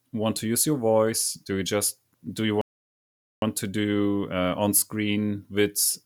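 Speech that cuts to silence at 2.61 s and picks up again at 3.42 s exactly where it stopped, a rebuffering stall: the player ran dry of downloaded audio and waited for more, so nothing is missing but about 0.81 s of dead time is inserted.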